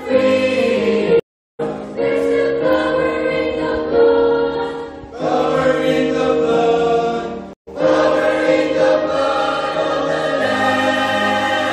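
At 1.20 s the sound drops to silence for 0.39 s and resumes at 1.61 s about 0.4 s further on. At 7.53 s a 0.14 s gap ends at 7.69 s with a skip of roughly 0.1 s. Both are stream reconnects: the connection broke, playback stopped, and a fresh decoder rejoined the live stream later.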